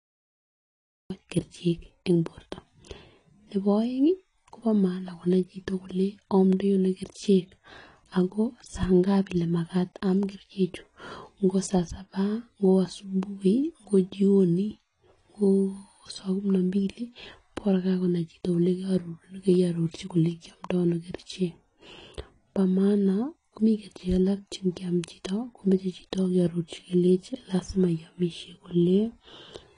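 The first 1.10 s are digital silence, and the speech then begins abruptly in the middle of a sound. This is a cut-off start: capture began after the talker had already started, so there is no natural onset or fade-in. On a waveform the trace is a dead-flat line until 1.10 s, then jumps straight into the signal. A spectrogram shows an empty field ending in a hard vertical edge, with energy appearing all at once.

From start to end the speech sounds dull and smeared, with a fizzy, warbling texture on sibilants and held vowels. This is the signature of AAC compression, most likely AAC-LC at a low bitrate; the damage fits something around 32 kbps. The encoder drops high-frequency content and quantises the rest coarsely. On a spectrogram, nothing appears above 10.2 kHz, leaving a sharp ceiling. Below it, upper bands show patchy holes and blurred, noisy fill in place of clean harmonic detail.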